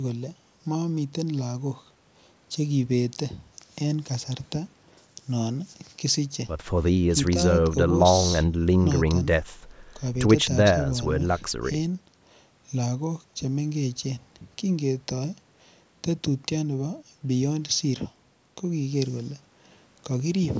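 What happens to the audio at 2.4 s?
At 2.4 s the speech carries on intact, with nothing beyond the normal call microphone processing, which trims the deepest bass and leaves nothing above 8 kHz.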